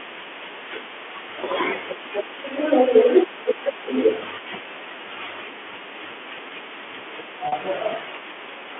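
At 7.48 s, right near the end, there's a packet loss with pitch repetition: about 40 ms of speech goes missing, which fits two 20 ms packets, and the receiver fills the hole by repeating the last pitch period. It comes across as a brief held, buzzy note before the speech picks up again at 7.52 s, still carrying the usual 300 to 3400 Hz band of G.711 telephone coding.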